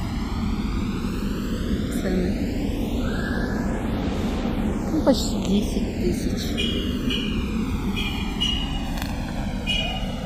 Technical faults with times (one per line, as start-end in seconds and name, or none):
0.00-10.25 channels drifting apart